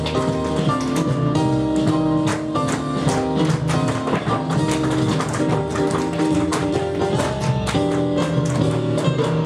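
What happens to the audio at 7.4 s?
Damaged data in a compressed stream hits the audio from 7.38 to 7.42 s. A short run of corrupted bytes leaves the decoder unable to read those frames, so it loses sync and hunts for the next valid header, producing a brief chirp or squawk lasting about 40 ms.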